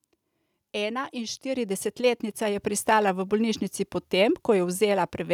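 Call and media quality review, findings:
Microphone volume stepped up at 1.56 s: call software judged mic input too quiet, raised device input gain in one step. Speech and background noise jump together by about 5 dB, no ramp.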